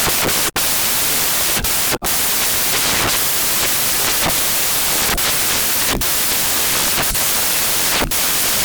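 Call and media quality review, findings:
Samples built from the wrong bytes, throughout: loud white noise, unlike steady hiss. Decoder byte order or alignment is pushing the low bits into the high ones.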